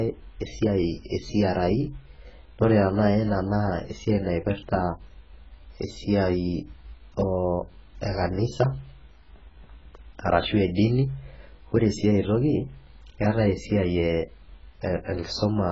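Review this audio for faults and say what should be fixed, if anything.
AAC compression, heavy, throughout the clip. The speech has nothing above 7.6 kHz, so it sounds dull. Sibilants come out smeared and fizzy rather than crisp, and held vowels carry a warble. The likely cause is an AAC-LC encode starved of bits, which fits a rate of around 12 kbps. At that rate the encoder lowers its cut-off and coarsely quantises what remains, leaving gaps and noisy fill in the upper bands. To prevent it, encode speech at 48 kbps or more, or keep a lossless master and encode once from it.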